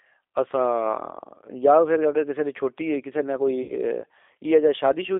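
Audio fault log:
Throughout, G.729 codec: the speech has a plainly audible rough, slightly synthetic edge, as an 8 kbit/s coder rebuilds it from a vocal tract filter and a few pulses per frame, and the band is squeezed to roughly 300 Hz to 3.6 kHz.
3.63 to 3.75 s, VoIP packet loss concealed by the speech codec: about 60 ms of audio went missing, which fits two lost packets. The decoder kept extrapolating its last pitch and filter with falling gain, so the sound smears into a fading buzzy tone or coloured noise before recovering.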